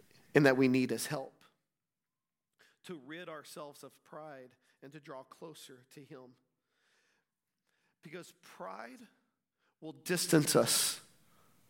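From 9.82 to 10.38 s the speech picks up zipper noise. The level changes by around 25 dB, but instead of gliding it moves in raw 1 dB jumps, roughly 40 a second, with no smoothing between them. Each jump puts a tiny click into the waveform, so you hear a fast ticking, zipping texture riding on the voice for that half second.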